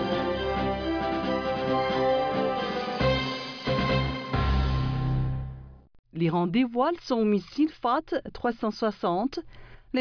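No technical faults can be heard anywhere in the clip. Nothing in the sound points to a break, a dropout or any other error.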